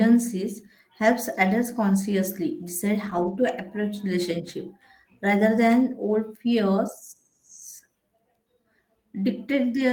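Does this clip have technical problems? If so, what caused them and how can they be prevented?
Yes. A lost packet rebuilt from error correction occurs from 3.05 to 3.23 s. There is no dropout, but the speech turns rougher and noisier for that stretch, which fits about five lost packets, roughly 100 ms of audio. Each following packet carried a low-bitrate backup copy of the missing one, and the decoder played those copies to fill the hole. Using a more stable connection, such as wired rather than congested Wi-Fi, would reduce the packet loss behind it.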